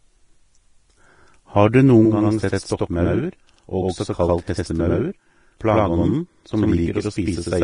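It's a speech clip with two problems. The whole thing sounds grainy and hissy, with heavy codec damage: the treble is roughened into noise, attacks are smeared, and nothing at all comes through above 10.6 kHz. That's likely Vorbis compression at low quality, which fits a bitrate around 30 kbps. The codec cuts off the top end and quantises what's left of the highs so coarsely that the detail turns into noise. Then from 2.05 s, right after "du noen", the channel delay (doubling) kicks in and runs to the end. One channel arrives about 93 ms late, which fits a 4096-sample buffer, and once the two are folded to mono you hear a second copy at the same level, like a doubling or a single slap echo on everything.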